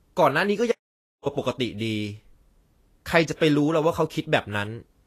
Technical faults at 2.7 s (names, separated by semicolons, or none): Vorbis compression